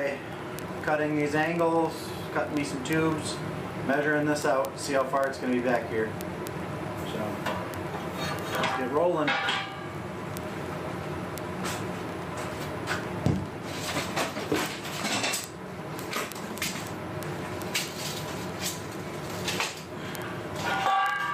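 From 0.13 s right through to 21.32 s there are word clock ticks. The receiver is free-running, about 700 ppm off the sender's clock, so roughly every 30 ms a sample gets dropped or repeated. Those hundreds of uneven ticks blur into a steady rattling buzz.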